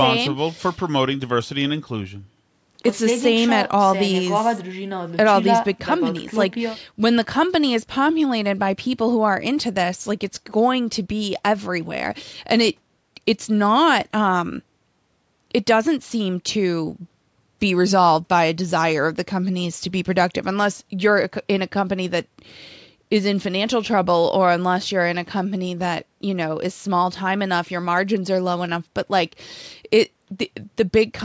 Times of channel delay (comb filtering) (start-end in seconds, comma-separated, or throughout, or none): none